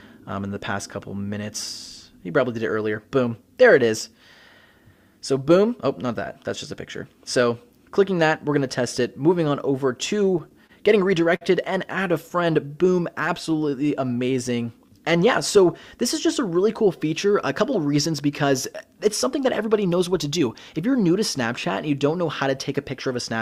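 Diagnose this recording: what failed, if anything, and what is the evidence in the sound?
The network path and the receiver's jitter buffer failed. Repeated stalls (stutter) run from 10.19 to 10.71 s: four brief holds, the longest 28 ms, together 60 ms of continued sound (12% of that span), with nothing lost. Late packets drained the buffer repeatedly. Unlike packet loss, no content vanishes; the sound just drags.

A single short stall from a late packet follows at 11.36 to 11.43 s. One sound is held for 52 ms while the buffer waits, then playback resumes exactly where it stopped, adding 52 ms of delay. It is a single stretched moment rather than a cluster of catches, and nothing is skipped.

A jitter buffer slow-down spans 12.37 to 15.68 s. Playback runs at 95% speed with unchanged pitch, as the receiver repeats single pitch periods and pause fragments, adding 177 ms to rebuild its reserve. 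Tape or clock drift would lower pitch. Here only duration grows, drawing sounds out.

A jitter buffer speed-up runs from 17.61 to 20.48 s at 107% speed, pitch unchanged. The receiver trims tiny pitch-period slices, about a fifth of a second in total, to shed surplus delay. It sounds hurried but stays at the same pitch, which rules out a sample-rate mismatch.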